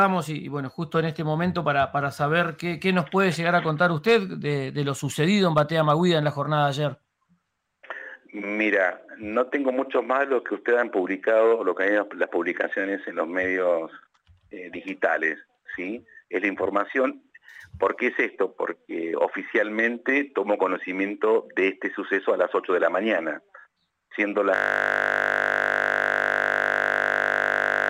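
At 24.56 s the machine or its audio driver stops supplying new data, but the sound hardware keeps replaying the last block left in its ring buffer: a system hang loop that runs to the end of the clip. The same 20 ms slice repeats exactly, well over a hundred times, so the audio collapses into a steady 50 Hz buzz, a frozen, mechanical drone with no movement left in it.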